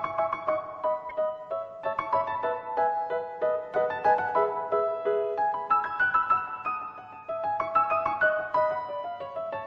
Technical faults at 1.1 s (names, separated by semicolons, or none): corrupt frame decoded